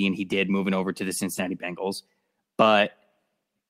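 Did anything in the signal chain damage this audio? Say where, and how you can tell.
Yes. The damage is at the network stage, and the codec's recovery covered it. Just after "moving over to the", from 1.33 to 1.39 s, the sound turns briefly rough and noisy. There is no gap or dropout. This is a lost packet rebuilt from error correction. The following packets carried low-bitrate backup copies of the missing audio. The decoder played those copies in place of the lost ones, about 40 ms in all, which fits two lost 20 ms packets.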